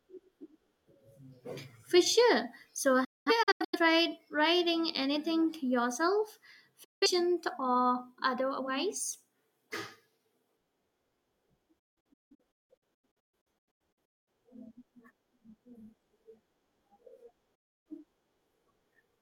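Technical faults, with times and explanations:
3.04–3.79 s, 6.84–7.07 s, 11.79–14.28 s and 17.55–17.86 s: digital broadcast dropout. The receiver mutes with 8 ms fades whenever frames fail, and the programme resumes later with the missing material gone rather than delayed. The first dropout leaves about 0.43 s of holes scattered over 0.68 s before "writing anything yourself". The second silences 0.17 s between that phrase and "or otherwise". The third is the longest, with 1.37 s of holes across 2.47 s. The fourth lasts 0.30 s. No single hole in the scattered dropouts is longer than 0.21 s. The short, consistent fades and clean returns distinguish these dropouts from analogue fading or a loose connection.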